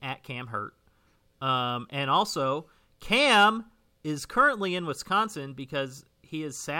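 Speech, with a burst of distortion from 3.13 to 3.45 s where the loudest moments turn gritty and broken. This is hard clipping: the signal ran about 3 dB beyond what a stage could pass, so its peaks were cut flat, and those flattened tops add harmonics high in the spectrum.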